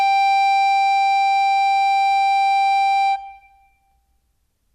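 A music clip with no audible technical faults.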